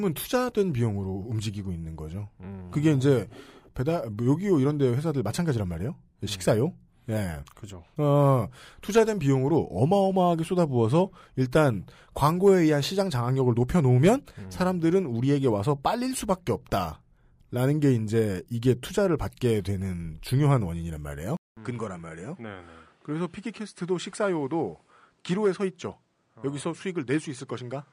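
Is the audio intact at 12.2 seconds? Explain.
Yes, at 12.2 seconds the speech plays through without any dropout, glitch or other audible fault.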